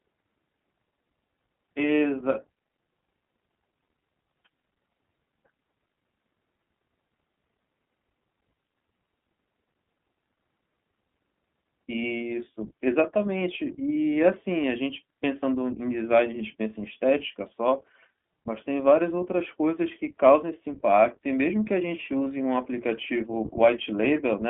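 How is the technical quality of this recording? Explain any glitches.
The technical quality is limited by narrowband coding. Throughout, the iLBC codec codes each 20 ms frame independently, consistent with its 15.2 kbps mode, so nothing passes above 3.6 kHz and the speech sounds muffled, slightly rough and synthetic.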